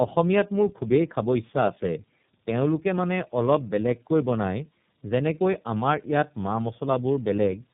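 Throughout the speech, tandem speech coding is audible: the signal passed through AMR-NB at 6.7 kbit/s, then a G.711 A-law link, then iLBC at 13.33 kbit/s, each coder re-encoding the previous one's artefacts. Nothing survives above 3.7 kHz, leaving it muffled, rough and warbly.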